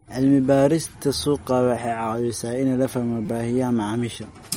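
MP3 compression runs through the whole speech clip: the sound has a watery, swirly texture, and nothing reaches above 16.5 kHz. That points to a likely cause of low-bitrate MP3 encoding, around 48 kbps, where the encoder cuts the treble and drops weak frequency lines.

A repeated buffer occurs from 3.26 to 3.28 s. New audio arrived late, so a 5.8 ms piece, which fits a 256-sample buffer, played four extra times with hard joins. It is heard as a brief buzz, and about 20 ms of audio is lost.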